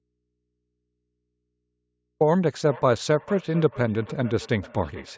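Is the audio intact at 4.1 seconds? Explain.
No. At 4.1 seconds the speech is shadowed by thinner, ringing repeats arriving roughly every 400 ms, peaking about 18 dB below the speech. This is feedback echo between two devices, running from 2.68 s to the end: one device replays the other's microphone, that microphone picks it up again, and neither echo canceller removes sound played by the other device.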